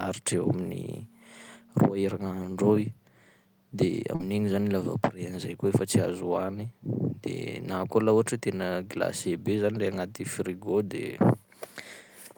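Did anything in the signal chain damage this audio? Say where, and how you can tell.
Yes. At 4.15 to 4.22 s the speech briefly smears and wobbles, a short concealed packet loss at the network stage. About 40 ms of audio arrived too late or not at all, and the receiver papered over roughly 38 ms by extending the preceding sound before blending back into real audio.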